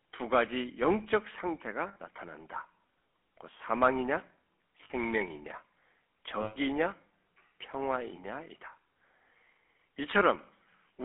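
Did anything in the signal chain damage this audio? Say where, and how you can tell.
Yes. At the codec stage, the GSM full-rate codec roughens the whole clip with a buzzy, gravelly texture. Energy sits inside a 300 Hz to 3.4 kHz band. The coder models the vocal tract and drives it with sparse, regularly spaced pulses, which fits a 13 kbps full-rate stream.

At the network stage, lost GSM frames cause three brief metallic rings. They occur at 1.88 to 1.97 s (80 ms), 4.84 to 4.91 s (60 ms) and 6.42 to 6.57 s (140 ms). The decoder repeated the last good frame's settings, smearing the sound.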